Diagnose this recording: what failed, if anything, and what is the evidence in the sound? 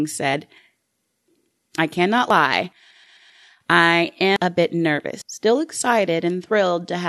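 At the driver or buffer stage, the capture side likely fell behind and the hardware overwrote samples before they were read, a dropped buffer (overrun). The speech jumps ahead with no gap of silence at each join: at 0.34 s and 2.30 s roughly a tenth of a second goes missing, and at 4.36 s and 5.22 s about three tenths.

At the codec or storage stage, a block of compressed audio was written or sent more than once, producing repeated frames. From 2.90 s to 3.43 s the same 130.6 ms stretch plays five times in a row, four extra plays, heard as a rhythmic stutter. The speech runs 522.4 ms longer than it should because of the duplicated material.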